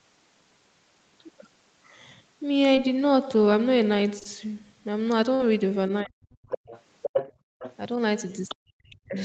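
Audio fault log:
2.75 s, 4.19 to 4.27 s: short concealed packet loss. About 20 ms of audio at 2.75 s, and two back-to-back 20 ms gaps at 4.19 s, never reached the decoder in time. The receiver extended the preceding sound to bridge each hole, leaving a brief smear or wobble.
5.35 to 5.42 s: burst of packet loss. About 40 ms of consecutive audio was lost, and the decoder filled roughly 50 ms by continuing the last sound while fading it. The result is a short held buzz or hiss, then the audio jumps ahead with that stretch missing.
6.03 to 6.56 s, 8.55 to 9.16 s: speech suppressed in double talk. The talker's speech dips sharply, by up to around 40 dB, for about half a second and then for about 0.7 s. The likely cause is an echo canceller unable to separate the talker from loudspeaker echo while both sides spoke, so it attenuated everything.
6.49 to 6.82 s, 7.02 to 7.33 s, 7.59 to 7.75 s, 8.48 to 8.55 s: other side's voice leaking through. 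A second voice comes through in scraps. It sits about 10 dB below the talker in the first stretch, at roughly the same level in the second, and well below in the last two. This is likely loudspeaker playback of the far end that the echo canceller failed to remove from the microphone.
7.33 to 7.59 s: background gated by the echo canceller. While the loudspeaker was active, the canceller clamped the microphone down hard, by about 37 dB. The room sound drops out for roughly 300 ms and returns when the suppression releases. Like the speech throughout, the room sound stays band-limited to 8 kHz by the Opus call path.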